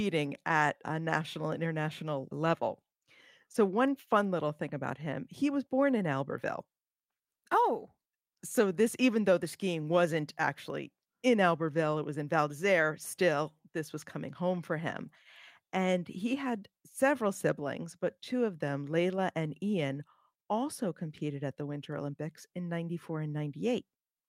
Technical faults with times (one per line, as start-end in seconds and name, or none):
none